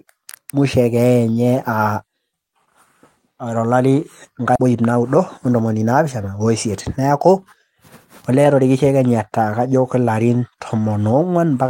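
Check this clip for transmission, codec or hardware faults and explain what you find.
Two transmission faults are audible in this speech, both around the five-second mark.

At 4.55 to 4.57 s there is a skip ahead. The speech lurches forward with no gap and the two sides are butted together. About 0.4 s of audio is missing, dropped in transit or discarded by an overflowing jitter buffer while later audio was already queued.

From 4.65 to 5.82 s, a jitter buffer speed-up makes the talker sound briefly rushed, at about 109% speed with unchanged pitch. The buffer held more audio than it targets, so the receiver trimmed short pitch-period slices repeatedly, shedding about a tenth of a second to reduce delay.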